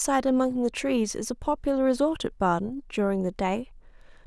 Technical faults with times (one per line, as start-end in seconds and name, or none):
none